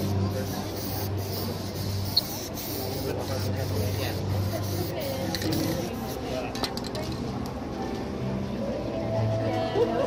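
Throughout, the audio is dull and gurgling, upper bands flickering on and off: likely MP2 compression near 80 kbps, its band switching unlike MP3's pre-echo.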